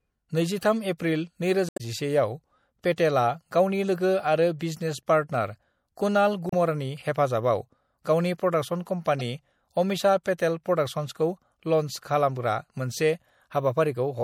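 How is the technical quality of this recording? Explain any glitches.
The technical quality is poor: the speech carries plainly audible codec damage throughout, plus several short glitches.

MP3 compression is the likely cause of the constant degradation. An encoder starved of bits, consistent with a low rate around 64 kbps, switches weak frequency lines on and off between frames, so the speech sounds watery and swirly, with metallic s sounds and smeared attacks.

Damaged data in a compressed stream occurs at 1.66 to 1.81 s, 6.49 to 6.55 s and 9.19 to 9.21 s. Corrupted bytes leave the decoder unable to read those frames, so it loses sync and hunts for the next header. Each spot comes out as a chirp, squawk, click or short hole.

Dropped samples occur at 5.34, 6.33 and 11.92 s, each a loss of only a fraction of a millisecond. The waveform jumps straight to a later value, which is heard as a single sharp click, with no sound actually missing. 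The likely cause is samples missing from the stream.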